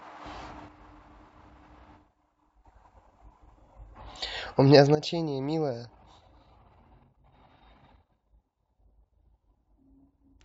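At 0.68 s the speech and its background noise drop together by about 8 dB in a single step, then return to full level at 2.65 s: a sudden gain jump, likely a digital gain setting applied without a ramp. A second step at 4.95 s cuts about 12 dB and holds to the end. On the waveform the envelope shows sharp vertical steps; a spectrogram shows every band, noise floor included, darkening at once.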